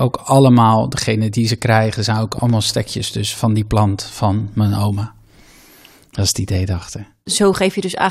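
Around 2.38 to 2.52 s, right after "ze krijgen zijn ook" and before "stekjes dus van die", there's a loud pop, actually two sharp thumps close together, poking a bit above the speech level while the talking carries on underneath. That's likely a voltage spike from a plug, switch or static discharge getting into the chain.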